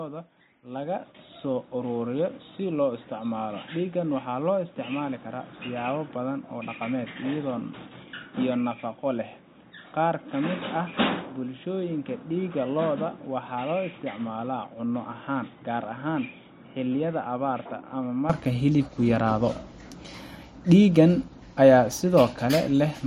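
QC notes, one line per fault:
0.0–18.3 s, input switched to a poorer device: speech band-limited to 3.8 kHz, about 10 dB quieter, faint added noise; clears without a gap at "hilibku yaraado", likely a device change.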